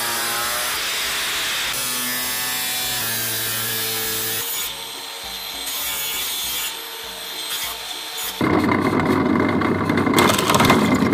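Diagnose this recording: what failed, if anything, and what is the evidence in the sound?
Periodic USB or driver dropouts run from 0.69 s to 10.68 s: a tick roughly once per second, about ten in all, spaced 0.999 s apart. The fault sits at the driver or buffer stage. Something stalls the USB transfer or audio driver on a fixed schedule, and each time around a millisecond of audio is skipped outright rather than padded with silence. The join produces a small discontinuity that clicks only where signal is present.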